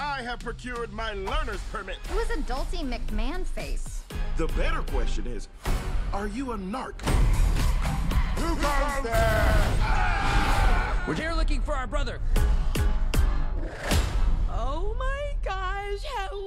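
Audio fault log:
Nothing in this audio calls for an entry, and no fault is heard at any point. The log holds just this single line.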